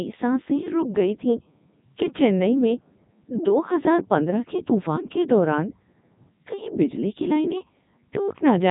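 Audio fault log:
Throughout: Codec 2 vocoder. The speech sounds robotic and buzzy from start to end, and the damage is heavy. Nothing is present above 3.8 kHz. This vocoder does not carry the waveform itself. It sends only pitch, voicing, energy and a rough spectral envelope. The decoder then rebuilds the speech from sine waves, which gives the synthetic, metallic tone. The quality fits the codec's top mode, around 3.2 kbit/s.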